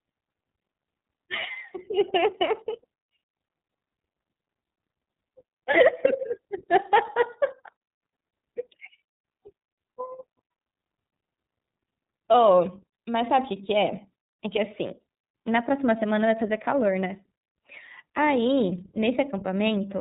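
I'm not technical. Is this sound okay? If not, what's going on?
No, not quite. The whole clip has been squeezed through the iLBC codec, a phone-call style compressor, and it shows. Everything above about 3.8 kHz is gone, so the speech sounds muffled and boxed in, like an old landline. The codec also rebuilds the sound in 30 ms slices, each handled on its own, which leaves the voice with a slightly rough, synthetic edge you can plainly hear from start to finish.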